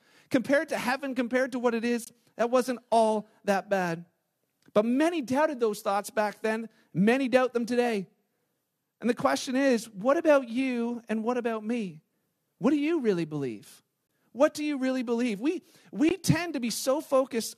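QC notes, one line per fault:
2.05–2.07 s, 14.07–14.09 s and 16.09 s, gap between stream segments: three short holes of silence, about 22 ms, 21 ms and 18 ms long, cut into the speech with abrupt edges on both sides. Each falls just after a multiple of 2 seconds, which fits 2-second stream segments whose timestamps don't quite meet, so the player pads the space with silence. The speech simply stops and resumes, and nothing is dropped.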